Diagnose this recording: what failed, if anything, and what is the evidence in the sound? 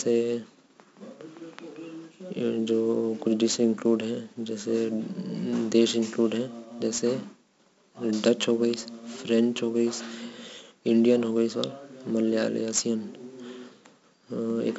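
The codec stage is the culprit here: the whole speech clip has been through 4-bit ADPCM compression, and it's heavy. You get a gritty hiss riding on every loud stretch, rising and falling with the level, plus roughness on sharp onsets where the adaptive step can't grow fast enough. Nothing comes through above about 7.7 kHz, so it's dull too, which points to a 16 kHz sample rate and roughly 64 kbps.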